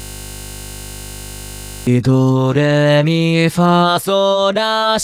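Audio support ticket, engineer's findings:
System hang loop, 0.00 to 1.87 s, already under way at start. Steady 50 Hz buzz: driver stalled, hardware replaying one 20 ms ring-buffer segment about 90 times.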